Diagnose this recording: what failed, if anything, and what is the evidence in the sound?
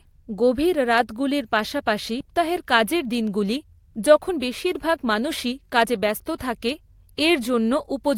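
A jitter buffer speed-up hits the speech from 2.32 to 6.04 s. That is a network-stage fault. The receiver trims repeated pitch-period slices to run at 107% with unchanged pitch, shedding roughly 300 ms of backlog.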